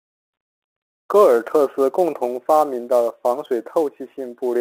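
Speech over a telephone-band line suffers sample clock jitter from start to finish: the converter's timing wanders by roughly 10 microseconds, so each sample lands slightly early or late, and the error scales with how fast the waveform is changing. The result is a gritty hiss, roughly 25 dB below the speech, that swells on loud and sibilant, high-frequency sounds and drops away in pauses. That dependence on slope, not just level, separates it from steady background noise or quantisation grain.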